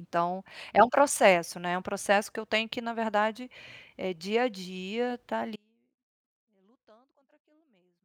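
The signal path likely lost its source at 5.56 s, an audio dropout to a faint residue: the speech cuts abruptly to a faint leak, roughly 35 dB down, through to the end.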